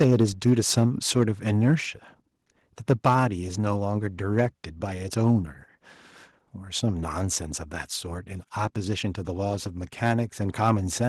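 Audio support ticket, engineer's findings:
Microphone overload at 0.00–0.86 s, 2.89–3.23 s and 4.38–4.45 s: harsh crackle on loudest syllables, peaks about 7 dB over full scale in the first two, about 2 dB in the third. Likely mic input gain set too high, so the converter flattens peak tops. On the waveform, flat-topped plateaus on around one sample in twenty; on the spectrogram, broadband vertical smearing.

Microphone volume stepped down at 0.04 s and 3.07 s: abrupt level drop of about 3 dB, with speech and background falling together, each inside an overload stretch. Probable component is the call software's auto gain control reacting to the clipping and cutting device input gain in one step. Waveform envelope shows a single clean step; the spectrogram darkens evenly across all bands.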